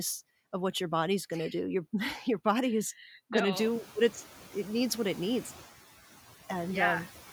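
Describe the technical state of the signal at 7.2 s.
At 7.2 s, noise suppressor artifacts are present, as they are across the whole clip. The suppressor pulls down bands it judges to be steady noise by about 10 dB, so the background dips between words and swells back under them. The room noise, which rose by about 17 dB near 3.5 s, sits about 19 dB below the speech here.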